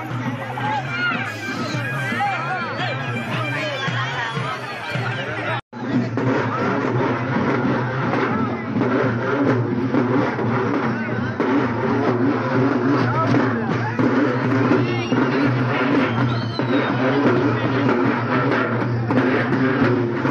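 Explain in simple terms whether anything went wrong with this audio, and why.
Nothing went wrong with the recording: there are no technical faults anywhere.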